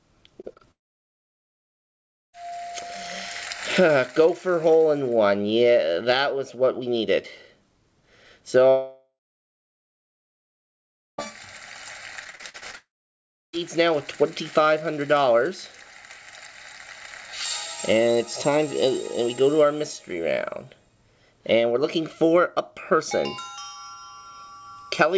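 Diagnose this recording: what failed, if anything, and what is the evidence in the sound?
Short concealed packet loss occurs at the network stage, three times near the start: 0.42 to 0.45 s, 0.53 to 0.58 s and 0.58 to 0.61 s. Each gap, about 20 ms of missing audio, is patched by extending the preceding sound and then crossfading back, so the ear catches a brief smear or wobble. On a spectrogram each one shows as a short stretch of smoothed, repeated harmonics or blurred noise. The waveform looks suspiciously periodic there instead of cut.

The long network dropout is heard three times: 0.71 to 2.35 s, 8.69 to 11.2 s, and 12.75 to 13.55 s. In each, the last sound carries on briefly as a fading buzz or hiss and then gives way to near silence. That silence lasts about 1.6 s, 2.1 s and 0.7 s respectively, and the audio resumes further on with the gap's content gone. The likely cause is a stall in packet delivery. 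A spectrogram shows a decaying smear trailing into a blank band, and the waveform collapses to a flat line.

Repeated packet loss (robotic sound) fills 12.24 to 12.75 s, right before the third dropout. Eight separate holes, the longest about 46 ms, cover roughly 42 percent of that half-second, and each is concealed before the next arrives. The result is choppy sound with fragments missing. On a spectrogram it appears as a striped patchwork of smeared, repeated slices. The waveform shows irregular, self-similar bursts. Across the clip, the call codec leaves nothing above 8 kHz, which fits a wideband codec such as G.722.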